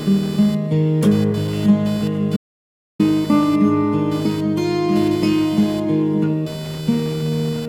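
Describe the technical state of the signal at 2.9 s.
At 2.9 s the signal is inside an audio dropout to silence running from 2.37 to 2.99 s. The input was likely lost for about 630 ms while recording continued, so the music cuts out to silence with no room tone, and the missing passage cannot be recovered.

Around that gap, computer activity noise sits under the music: load changes in the machine shift the audio circuit's shared ground, adding a buzzy pulsing near 500 times a second, roughly 20 dB below the music. Inside the silent span it disappears along with everything else.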